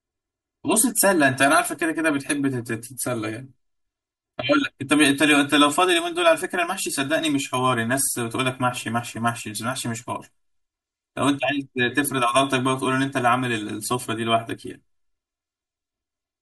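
Speech with channel delay (comb filtering) throughout: one channel arrives roughly 3 ms late, so the mono sum is hollow, with evenly spaced dark notch bands on a spectrogram starting near 150 Hz.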